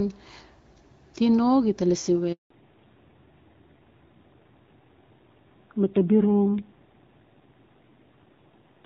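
At 2.32 s, just after "tino gita lasi we", a handover gap cuts the speech for about 180 ms, until 2.50 s. The call was passed between networks and no speech frames arrived during the switch, so the sound drops out abruptly and anything spoken then is gone.

From 2.50 s to the end, a fallback to narrowband takes over. Before the gap the wideband HD Voice codec carries clear speech consistent with a 12.65 kbit/s mode. Afterwards nothing remains above 4 kHz, and the speech sounds duller and rougher, which points to a low-rate narrowband codec around 7.4 kbit/s.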